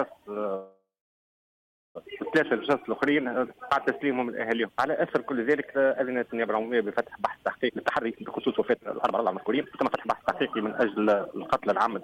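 Call audio freeze from 0.55 to 1.97 s: the sound stalls, the last moment trails on briefly as a fading buzz or hiss, and then about 1.08 s of silence follows before the audio resumes exactly where it stopped. The likely cause is delayed packets draining the jitter buffer, so the receiver filled about 1.4 s with concealment. Nothing is lost; instead a gap is inserted, and everything after it arrives that much later.

Jitter buffer speed-up from 7.68 s to the end of the clip: the audio plays at about 132% of normal speed while keeping its pitch, so it sounds rushed rather than higher. With the buffer holding more than its target, the receiver repeatedly cuts out short slices a pitch period or a few long, trimming roughly a second and a half in total to work the accumulated delay back down.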